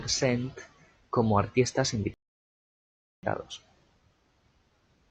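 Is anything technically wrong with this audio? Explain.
Yes. From 2.14 to 3.23 s, just after "como artistas", a rebuffering stall: the player exhausted its downloaded audio and waited, inserting about 1.09 s of silence before the speech resumes exactly where it stopped.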